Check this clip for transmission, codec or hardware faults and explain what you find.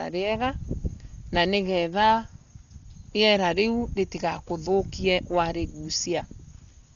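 The speech is dull throughout, with nothing above 6.9 kHz and a rough, fluttering noise around voiced tones. This is likely heavy Dolby Digital compression at a low bitrate, which fits about 40 kbps. Starved frequency lines are filled with dither noise. On a spectrogram, a hard ceiling at 6.9 kHz and speckled, patchy harmonics would show.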